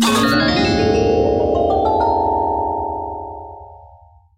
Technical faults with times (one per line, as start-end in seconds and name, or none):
none